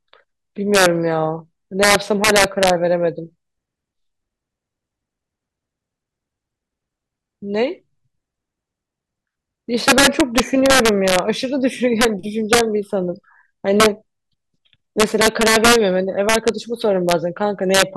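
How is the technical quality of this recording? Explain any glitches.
Integer overflow runs throughout the speech. The signal is pushed about 7 dB past the integer limit, and instead of being held at full scale, every peak that crosses it wraps to the opposite sign. Only a small fraction of samples, around one percent, go over, but each one becomes a violent crack on louder syllables, far harsher than ordinary clipping.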